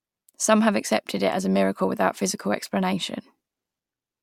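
Speech recording, no technical faults detected anywhere in the clip.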